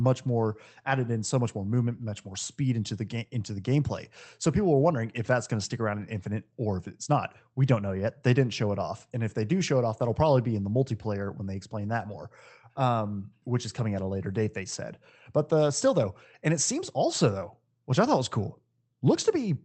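At 4.85 s, a 20 ms stretch of this speech turns briefly rougher and noisier without dropping out. This is a lost packet rebuilt from error correction: the next Opus packet carried a low-bitrate copy, and the decoder played that coarser copy instead of leaving a gap.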